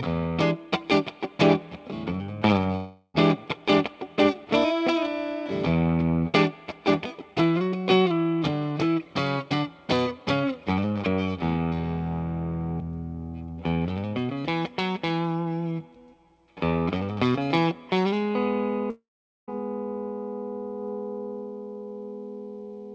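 At 2.76–3.16 s and 18.90–19.49 s, a fading synthetic buzz, then silence lasting about 0.45 s in the second, marks a likely long network dropout.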